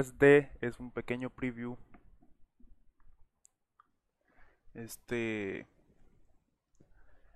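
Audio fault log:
0.0–3.9 s, channel delay (comb filtering): for the first stretch one channel trails the other by only a few samples, about a tenth of a millisecond, and once the two are folded to mono the shared content cancels at evenly spaced frequencies. With the first notch up around 5 kHz, the top end loses its air and sounds a bit hollow and dull, a fixed phasey colour that stays put until the channels line up again at 3.9 s.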